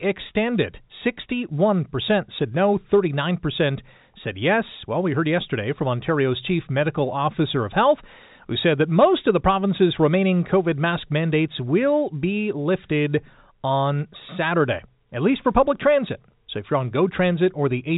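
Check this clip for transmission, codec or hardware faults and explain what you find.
No transmission, codec or hardware faults can be heard in this speech clip. It carries the narrow sound of G.711 telephone coding, with nothing above about 3.8 kHz and at most a faint quantisation hiss that rises and falls with the level of the voice.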